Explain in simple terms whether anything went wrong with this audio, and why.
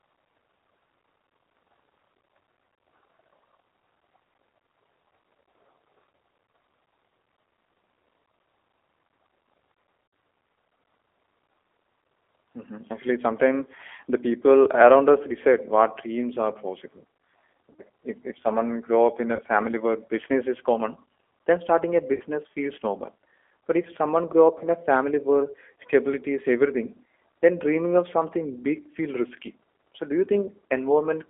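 The speech sounds thin, slightly rough and synthetic throughout, with nothing above about 3.4 kHz. That is the G.729 codec, a low-rate phone codec that rebuilds the voice from a simplified model.

Short buzzy or smeared blips interrupt it at 6.46–6.49, 10.07–10.13, 17.73–17.82 (just before "if if someone grow"), 19.36–19.41 (between "someone grow up in" and "family where business is"), 22.14–22.22 and 24.58–24.69 s (between "if someone grow up" and "a family where stability"). These are VoIP packet loss concealed by the speech codec: 30 to 60 ms of audio went missing, and the decoder filled each gap by stretching the last sound.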